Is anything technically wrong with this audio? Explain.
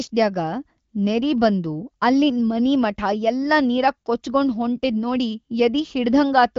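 No, nothing in this speech is technically wrong. It carries the band limit of AMR wideband (HD Voice) coding, with nothing above 7.5 kHz and only light codec colouring, consistent with one of the higher rates of that codec.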